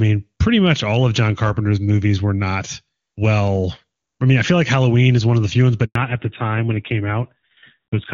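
Right after "of the few ones", at 5.85 s, the speech cuts out for a 100 ms handover gap and stays silent until 5.95 s. The call was passed from one network to another, and no speech frames were delivered during the switch. What distinguishes this from a packet-loss dropout is that the sound is not smeared, repeated, or concealed with synthetic filler. It fades within a few tens of milliseconds into true silence, and then the new link picks up.

When speech resumes at 5.95 s, the fallback to narrowband begins and lasts until the end. The clear HD Voice sound, which points to AMR-WB at around 23.85 kbit/s with little or no audible coding damage, gives way to audio with nothing above 4 kHz. That fits a switch to AMR-NB at about 7.4 kbit/s. Unlike a simple low-pass filter, the drop comes at the handover and brings added roughness, so the sound turns both duller and grainier.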